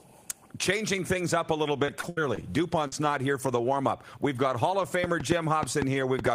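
Repeated packet loss (robotic sound) from 1.85 to 2.93 s: six short holes, the longest 75 ms, are patched by stretching earlier sound, leaving a choppy stutter. A train of clicks runs from 5.04 s to the end, about 5.3 per second at an uneven pace and about 15 dB above the sound, likely from electrical interference or a struggling interface.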